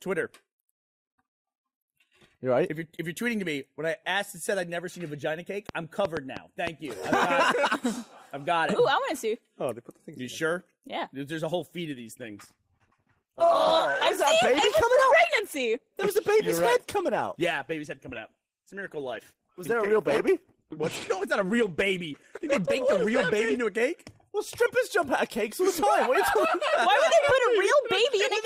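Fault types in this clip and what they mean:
Train of clicks: From 5.69 to 7.15 s, roughly seven sharp, similar ticks pop out well above the sound, about 3.5 per second at uneven spacing. This is likely interference from nearby equipment or a faulty connection or power supply injecting repeated pulses.
Adaptive stream at a lower bitrate: From 11.60 to 23.60 s, the quality abruptly drops, with more codec artefacts and no gap at either switch. It fits a stream dropping from about 64 to 16 kbit/s Opus while the connection slowed.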